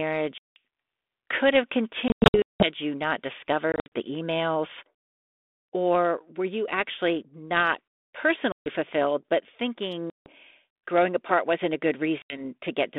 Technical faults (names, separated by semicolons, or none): packet loss on an ADPCM call